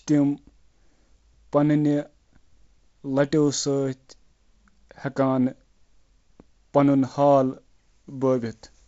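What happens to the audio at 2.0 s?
Nothing goes wrong at 2.0 s: the speech passes through intact, carried by G.722 wideband telephone coding at 48 kbit/s with its band ending near 7.7 kHz.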